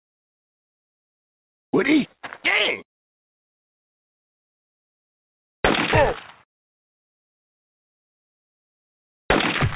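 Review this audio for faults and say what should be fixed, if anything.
Nothing stood out on listening, so there is nothing here that calls for a fix.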